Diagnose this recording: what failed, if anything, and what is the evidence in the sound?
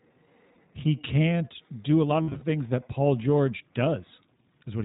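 Codec stage: the iLBC codec cuts everything above 4 kHz and leaves the speech slightly rough and synthetic, consistent with the 15.2 kbps, 20 ms-frame mode.

Network stage: lost iLBC frames at 0.54, 2.22 to 2.43 (scattered, longest run around 70 ms), and 4.14 to 4.20 s produce a held, buzzy repeated pitch cycle before clean recovery.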